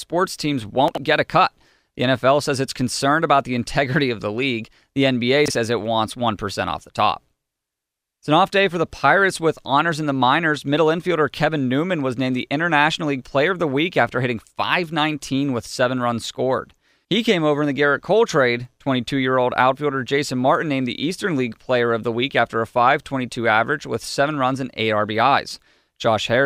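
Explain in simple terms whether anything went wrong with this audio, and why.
Two brief glitches in this speech come from chunks out of order. At 0.88 to 0.98 s, just before "get a cut", a slice of sound about 23 ms long arrives three slices late, and at 5.46 to 5.50 s, just before "says it wants", another is one slice late. Each sounds like a quick jumbled stutter. Unlike a dropout, nothing goes missing or silent. The sound is all there, just briefly shuffled.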